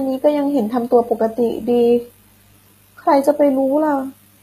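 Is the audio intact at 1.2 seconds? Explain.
No. At 1.2 seconds, as across the whole clip, the speech carries what is most likely HE-AAC compression. Only the lower spectrum seems properly coded, with the treble rebuilt by copying lower bands upward under a coarse envelope, so its harmonics fail to line up with the real ones below. The damage is plainly audible: s sounds come out gritty and lispy, nothing reaches above 14.9 kHz, and the sound points to a low bitrate of around 20 kbps.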